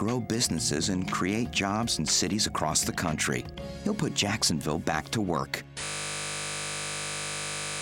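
At 5.84 s a system hang loop begins and runs to the end. A 20 ms piece repeats exactly at 50 Hz, a steady buzz, while the buffer cycles.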